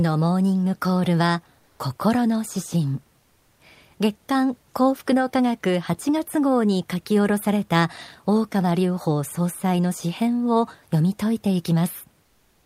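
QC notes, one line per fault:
1.59–1.79 s, 3.19–3.59 s and 12.23–12.66 s: comfort noise in place of the background. In these speech pauses the real room noise, about 42 dB below the speech, gives way to a flat, featureless hiss, level in the first gap and about 2 dB and 3 dB quieter in the later two. This is likely Opus discontinuous transmission: the sender goes silent when it detects no speech, and the receiver fills the gap with synthetic noise roughly matched to the background.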